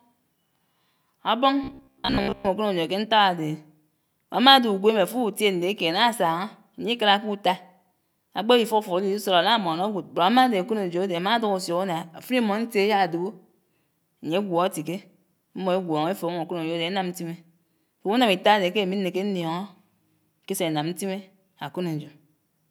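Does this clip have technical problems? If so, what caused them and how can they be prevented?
Yes. Robotic sound from repeated short buffers at 1.64 to 2.48 s: a metallic 66.8 Hz buzz, likely a starved stream looping fragments of about 15 ms. A larger buffer and enough processing headroom would keep new audio arriving on time.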